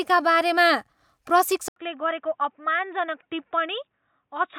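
At 1.68 s the speech breaks for 80 ms and returns boxy, with nothing above 3.8 kHz, a few dB quieter and over a faint new noise: likely an input switched to a poorer device. The gap and new noise floor rule out plain filtering.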